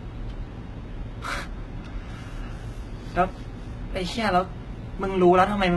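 Throughout, the treble of this speech sounds synthetic and gritty, with nothing above 11.8 kHz. This is likely heavy HE-AAC compression near 16 kbps, its copied-up treble lisping unlike a plain low-pass.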